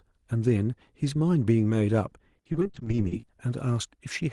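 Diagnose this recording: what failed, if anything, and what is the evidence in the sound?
From 2.38 to 3.24 s the speech turns choppy, breaking into many brief holes of up to 50 ms. This is repeated packet loss (robotic sound) at the network stage: about 390 ms, nearly half the span, was patched by extending the preceding audio.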